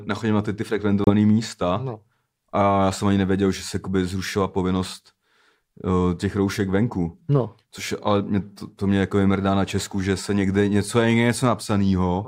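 Packets on the wireless link most likely failed to reach the headphones in time and were discarded, a Bluetooth dropout, in this speech recording. From 1.04 s to 1.10 s the output falls silent. About 28 ms of audio is missing, which fits two lost frames. When the sound returns it has skipped ahead, as if it had kept playing through the hole, so the speech jumps rather than pausing and resuming.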